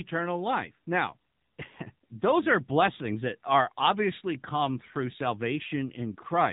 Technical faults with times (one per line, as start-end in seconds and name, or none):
0.00-6.53 AMR narrowband mobile codec